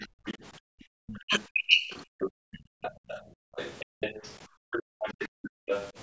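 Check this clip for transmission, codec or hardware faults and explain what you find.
Three related faults from echo cancellation on a loudspeaker call run through this speech clip, with the far end audible for most of its length. The band stops at 8 kHz, as the call's microphone processing leaves it.

The other side's voice leaking through appears from 0.0 to 0.37 s and again from 1.07 to 5.91 s. A second, fainter voice sits under the talker, around 25 dB down at first and closer to 20 dB down in the long stretch. The likely cause is a loudspeaker on the talker's device playing the far end back into the microphone, with the echo canceller leaving part of that signal in place.

Speech suppressed in double talk occurs from 0.01 to 0.12 s, for roughly a tenth of a second, and from 1.21 to 1.9 s, for about half a second in total. The talker's own voice drops sharply, by something like 35 to 40 dB at its deepest, while the second voice is present. 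This is likely the canceller failing to tell the talker apart from the loudspeaker echo and turning both down together.

Background gated by the echo canceller occurs from 0.59 to 0.93 s and from 2.18 to 5.66 s, with the room sound cut by up to about 38 dB. The first dip lasts about 0.3 s. In the second span, roughly two seconds of the background drop out in patches. The canceller clamps the microphone hard while the loudspeaker plays, so the room tone vanishes and then returns each time it releases.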